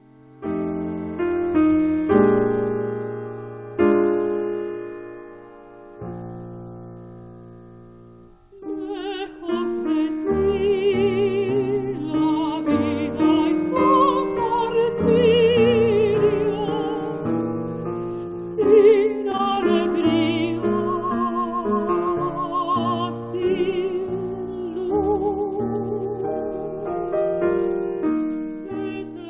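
From 18.28 to 19.98 s, repeated packet loss (robotic sound) sets in. About nine short holes, the longest near 43 ms, are patched by stretching earlier sound. It turns choppy.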